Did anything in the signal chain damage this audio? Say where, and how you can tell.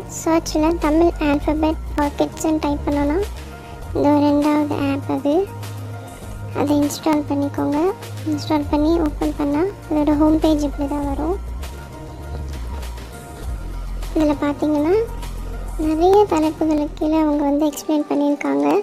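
Yes. Steady clicks recur every 0.64 s from 0.70 to 18.71 s. These are likely clock drift buffer slips in the buffer: two clocks roughly 500 ppm apart force it to drop or repeat about 15 samples each time.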